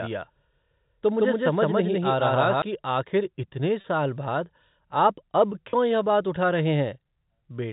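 From the first moment until 2.62 s, the audio is most likely captured twice, with a second, slower path feeding in a copy of the same speech, giving a doubled audio track. The trailing copy sits roughly 150 ms behind and at about the same level as the original, so every syllable is followed by a clean, full-band echo with no room colour or decay. At 2.62 s the duplicate cuts off abruptly and the speech becomes single.

Packet loss with pitch repetition occurs twice, at 3.81 to 3.84 s and again at 5.70 to 5.73 s. Each time, about 30 ms of audio, which fits a single lost packet, fails to arrive, and the receiver fills the hole by repeating the last pitch period of the speech. Because the gaps are so short, the repetition never fades to silence. Each one comes across as a brief, slightly held buzz before the speech carries on, with the narrow telephone band of the G.711 coding unchanged around it.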